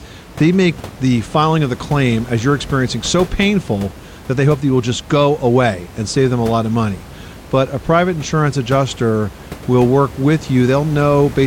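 No technical faults occur anywhere in the speech, and the room noise sitting about 18 dB beneath it is part of the recording itself.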